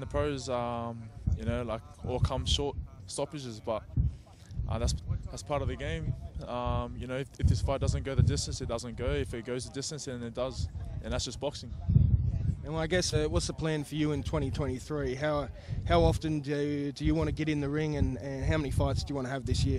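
At 11.68 s and again at 13.12 s, compressed frames are skipped. Whole frames never reach the output, so the audio jumps ahead by about 0.2 s, then about 0.4 s. Each join is brief, and the frames are 46.4 ms long.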